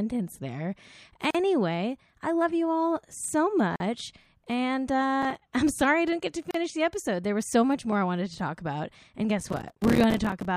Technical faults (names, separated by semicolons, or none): gap at a join of encoded pieces; processor overload crackle